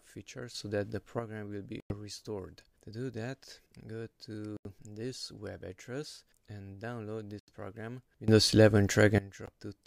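The audio has two sudden gain jumps. Sound and background noise rise together by about 6 dB from 0.54 to 1.19 s and by about 18 dB from 8.28 to 9.18 s, likely from a digital gain change applied without a ramp. Four Bluetooth stalls cut the sound to silence at 1.80, 4.57, 7.39 and 9.46 s, for 100, 84, 85 and 15 ms respectively, before playback resumes. The likely cause is interference delaying packets until the headphone buffer runs dry.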